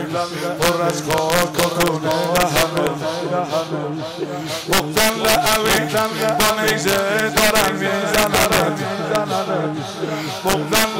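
The audio has integer overflow throughout. Loud peaks, driven about 6 dB past full scale, wrap to the opposite sign instead of limiting. Around one percent of samples go over the limit and flip across the full range.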